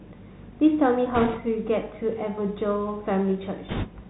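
The whole clip passes through the Bluetooth CVSD headset codec. The sound fits a 64 kbps one-bit delta link. Nothing above 4 kHz survives. Sibilants turn scratchy, loud bright sounds distort as the step size lags, and a granular hiss sits underneath.

From 1.14 to 1.38 s, bit errors on the Bluetooth voice link add a rushing, crackly noise. Roughly one bit in twenty is flipped. Each bit carries little weight and errors fade, so there are no sharp clicks. From 3.69 to 3.87 s the same fault returns, rougher, near seven percent.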